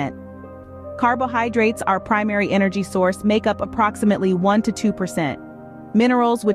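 Nothing in the audio stood out as a technical problem on listening.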